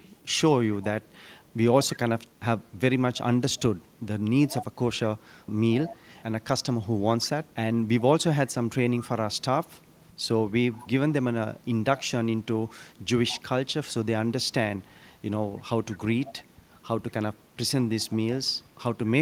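Speech is heard throughout, with an echo leak. A faint copy of the voice trails it by 175 ms. It appears at 0.0–0.34, 0.72–2.8, 3.14–3.19, 3.52–4.02, 4.46–4.76, 5.19–8.02, 8.47–11.12, and 11.55 s to the end. It is mostly very quiet, roughly 25 to 35 dB below the speech. It is strongest at 4.46–4.76, only about 10 dB down. The likely cause is a loudspeaker at the other end whose echo canceller let its microphone pickup come back.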